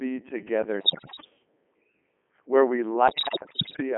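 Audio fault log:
throughout Codec 2 vocoder: the speech sounds robotic and buzzy, confined to a narrow band of about 200 Hz to 3.4 kHz, with heavy coding damage. The decoder does not carry the original waveform. It rebuilds the sound from sine waves driven only by pitch, voicing, energy and a coarse spectral envelope. The sound fits Codec 2's 3.2 kbit/s mode, its highest rate, though the artificial, synthetic timbre still dominates.
0.80–1.30 s and 3.08–3.82 s, bit errors on digital voice radio: in these two stretches the voice lurches in pitch and level and its tone colour shifts abruptly, breaking into warbles, bleeps and robotic gibberish. The second burst follows "where we". At this very low rate each bit sets a whole frame's pitch, energy, voicing or spectrum, so flipped bits at rates of around 15 and 10 percent respectively corrupt entire frames.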